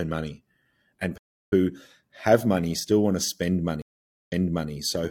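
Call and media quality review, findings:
Playback stall, 1.17–1.53 s: speech cuts out right after "money and" for about 340 ms, then continues. Likely player buffer underrun or blocked audio thread. No repeated material, unlike the later reconnect.

Stream reconnect, 3.82–4.71 s: 462 ms silence, then audio resumes about 0.43 s earlier, replaying material already heard. Connection dropped and a fresh decoder started mid-stream on a server resend burst. The repeated span distinguishes it from a plain stall.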